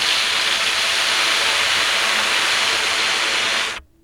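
Nothing stood out as a technical fault on listening to these sounds.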